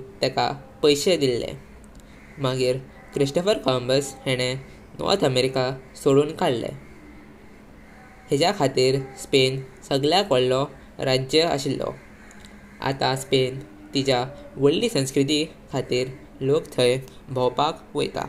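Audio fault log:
Nothing stood out on listening to this speech recording.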